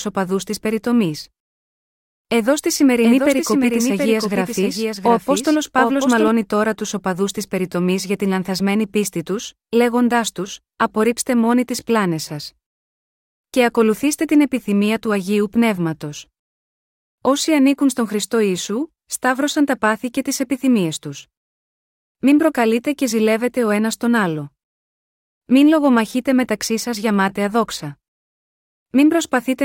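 It's a speech recording, and between 3.04 and 6.28 s you get a doubled audio track: a second full-band copy of the same speech rides about 0.7 s behind the original, roughly 5 dB quieter. It's dry, with no decay or room colour, and it cuts in and out abruptly at those edges. That's most likely a second capture through a slower path, or an edit leaving two copies out of step.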